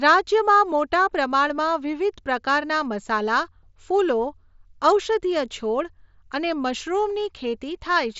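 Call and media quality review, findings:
No faults found.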